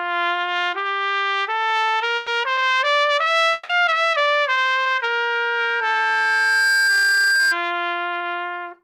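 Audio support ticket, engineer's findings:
Burst of packet loss, 2.16 to 2.28 s: about 110 ms of sound replaced by a continuation of the preceding audio that fades out. Network jitter buffer. Consecutive packets lost or late. Concealment extended the last frame, and playback resumed past the gap.

3.53 to 3.70 s: about 160 ms where the last sound is carried forward and fades, with no full silence, then audio returns with that stretch missing. Likely a long network dropout. Stream interrupted. Receiver concealment covered the outage.

Loudspeaker feedback squeal, 4.82 to 7.59 s: a 1.6 kHz tone swells over roughly two seconds and holds about 5 dB above the programme sound. Acoustic path from speaker to mic. Loop gain exceeds one at 1.6 kHz, so the tone builds on itself.

Short concealed packet loss, 8.19 s: about 10 ms filled in, heard as a brief smear or wobble. Decoder packet-loss concealment. 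The late or lost audio was synthesised from the preceding sound, then cross-faded back into the real audio.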